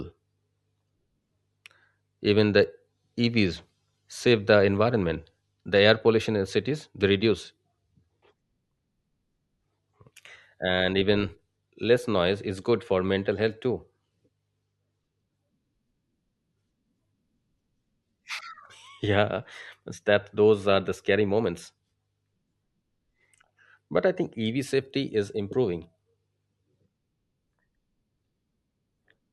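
Nothing in this speech recording stands out as a technical problem; it just runs along without any glitches catching the ear.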